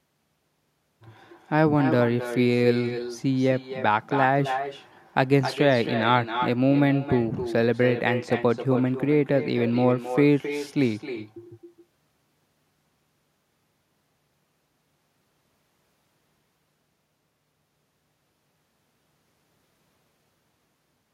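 Echo with no canceller runs through the whole of this speech recording: every phrase is followed by a quieter, thinner duplicate around a third of a second later, sitting about 10 dB below the direct sound. The far end is evidently playing the call over a loudspeaker, its microphone captures that playback, and no echo cancellation strips it out, so the talker's own voice returns after the network round trip.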